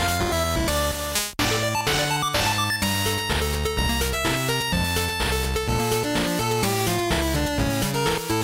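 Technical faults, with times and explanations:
No technical faults found anywhere in the audio.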